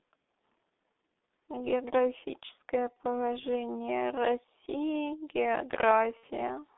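Throughout, the speech carries heavy G.723.1 codec damage. The line passes only about 200 Hz to 3.6 kHz, so everything above that band is gone and the sound is muffled. The hoarse, smeared texture and blurred consonants point to the codec's rate of roughly 6.3 kbit/s. Its 30 ms frames and slow-updating voice model cannot follow fast changes, so transitions lose their definition.

At 2.94 to 2.97 s comes the first VoIP packet loss concealed by the speech codec. The gap lasts about 30 ms, which fits one lost frame. The decoder fills it by repeating its last pitch and spectral shape at falling gain, so the sound is briefly stretched into a buzzy tone or coloured noise that fades.

A second loss runs from 6.17 to 6.25 s. About 60 ms is missing there, suggesting two frames, so the concealment stretches further and decays more. Because each decoded frame depends on the one before, the speech stays weak and distorted for a short stretch after the packets return.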